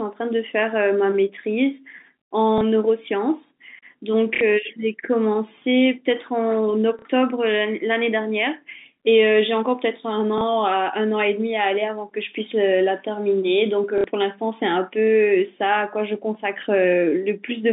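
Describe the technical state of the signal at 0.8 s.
At 0.8 s the speech is intact, with no fault audible beyond the narrow telephone band of the G.711 line it travels over.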